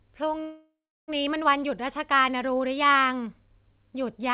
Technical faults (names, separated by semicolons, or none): call audio freeze